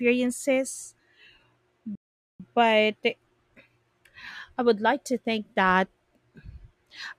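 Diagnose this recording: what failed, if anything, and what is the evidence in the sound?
Playback stall: the speech falls silent from 1.95 to 2.40 s, a blank band across the spectrogram, then continues; the player likely starved of data.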